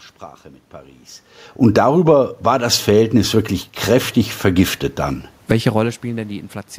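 From 1.53 to 2.06 s the speech and the room noise behind it sink together by about 6 dB. This is automatic gain falling. Shortly after the talker moves at around one second, the gain control judges the input too loud and pulls its gain down gradually. Because the whole signal drops as one, the background dips with the speech.

Almost immediately, from 1.97 to 4.86 s, speech and room noise swell back up together by about 10 dB. This is automatic gain rising: the control now finds the input too quiet and slowly raises its gain. The long ramp makes the background creep up audibly alongside the speech.

A shorter swell of about 4 dB follows from 5.57 to 6.04 s. This is also automatic gain rising. As the talker moves around 5.5 s, the level reaching the microphone drops by about 20 dB, and the control partly compensates by lifting speech and background together.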